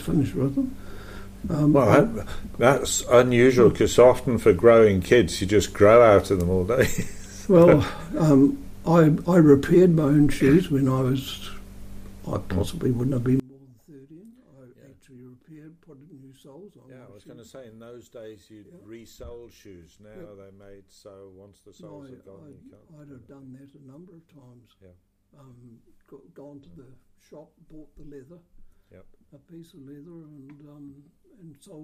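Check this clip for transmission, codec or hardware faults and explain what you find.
One fault is present: one channel inverted, starting at 13.40 s and continuing to the end. The likely cause is a polarity flip on one side of the stereo path, so the two channels now oppose each other. When they are summed to mono, everything they share cancels, and the level drops by about 27 dB. Centred material all but disappears, leaving only a faint residue of whatever differs between the channels.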